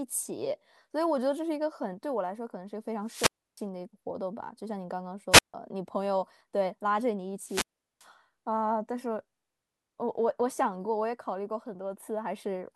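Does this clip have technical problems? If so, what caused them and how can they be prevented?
Yes, the speech has three wireless microphone squelch dropouts: 3.04–3.65 s, 5.31–5.54 s and 7.41–8.09 s. Each time the FM signal fades, hiss rises, and the receiver mutes for 0.31, 0.15 and 0.39 s. Keep the transmitter close to the receiver and in clear line of sight.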